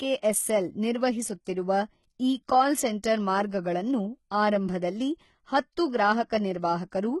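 Throughout, s sounds are gritty and lispy, with nothing above 11.8 kHz: likely heavy HE-AAC compression rebuilding treble from copied lower bands, fitting about 16 kbps.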